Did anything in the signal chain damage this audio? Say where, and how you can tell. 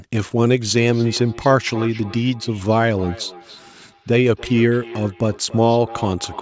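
Yes. Feedback echo between two devices runs from 0.77 s to the end. The speech comes back roughly every third of a second, up to about 18 dB below the speech. A second device in the room replays this microphone's signal, and the microphone picks it up again. Its echo canceller only removes its own playback.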